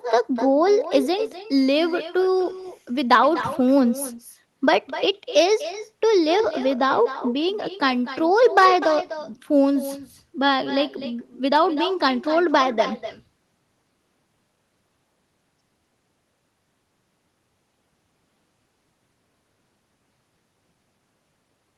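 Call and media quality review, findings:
Echo with no canceller, throughout: every phrase trailed by a quieter, thinner copy about a third of a second later, about 12 dB down. Far-end loudspeaker output re-captured by its mic, no echo cancellation, returned over the call path, whose top end stops near 12 kHz.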